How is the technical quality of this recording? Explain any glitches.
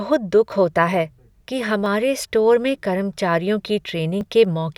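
The speech has three audible glitches, all consistent with a dropped buffer (overrun). At 0.52 s, just before "होता है कि", and at 1.86 s, just after "होता है कि", about 10 ms of audio is missing. At 4.21 s, about 30 ms is missing. Each time there is a small forward jump with no silence. The likely cause is samples being overwritten before they were read, so the two sides of the gap join directly.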